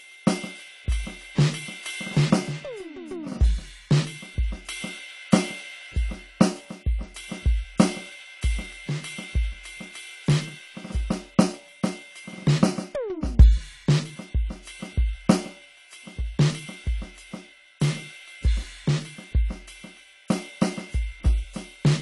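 AAC compression throughout the music, likely from a low-bitrate AAC-LC encode around 32 kbps: nothing above 11.5 kHz, leaving a dull, smeared sound with warbling, fizzy texture.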